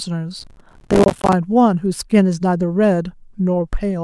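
From 0.40 s to 1.33 s there's processor overload crackle: the machine kept missing its deadlines on small buffers, which points to buffers of around 5 ms, and dozens of them came up as brief silent gaps with hard edges. The result is a gritty, tearing crackle across the speech until the load eases.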